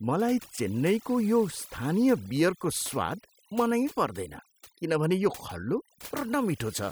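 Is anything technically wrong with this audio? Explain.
Yes. Throughout, the background drops and breaks up into twinkling specks: overdone noise removal, muting frequency bands near the noise estimate along with quiet speech detail.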